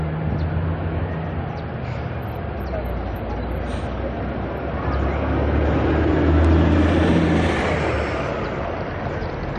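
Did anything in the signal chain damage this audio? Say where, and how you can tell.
Yes, there's a block of digital silence at 6.45 s, about 0.67 ms long, which fits a 32-sample buffer. The audio drops straight to silence and back with no fade, so the gap is heard as a single tick. That points to the driver or buffer stage.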